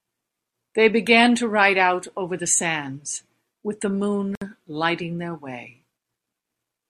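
At about 4.35 s the speech just drops out for roughly 63 ms, until about 4.42 s, and then picks up exactly where it left off. That's a gap at a join of encoded pieces. The audio was encoded in separate chunks and stitched together without trimming, so the encoder's start-up delay and the padding on the previous chunk's final frame both stayed in as silence. The codec smears the edges, so the truly silent part is a bit shorter than that.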